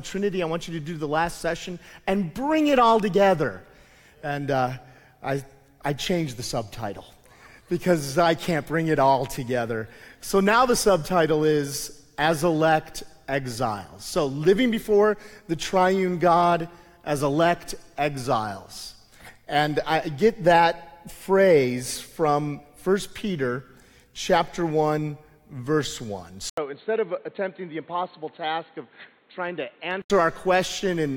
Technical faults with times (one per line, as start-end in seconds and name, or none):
26.49-30.10 input switched to a poorer device